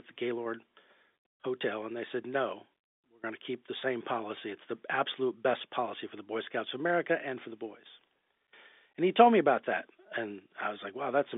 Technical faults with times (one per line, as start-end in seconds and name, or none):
none